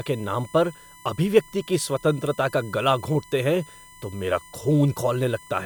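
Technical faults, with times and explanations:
Throughout, USB whine: a steady, thin whistle sits under the speech at a fixed pitch of 1 kHz, strongest there and about 25 dB below the speech, never gliding with what is said. Its pitch matches the USB bus's 1 ms frame rate: each frame's burst of current ripples through the shared power or ground, and that repeating disturbance reaches the audio path as a tone at exactly that frequency.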